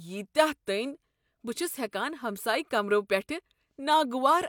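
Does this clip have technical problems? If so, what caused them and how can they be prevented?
No, there are no technical problems to report in this clip. With no fault present, there is nothing here that needs a cause explained or a fix to prevent it.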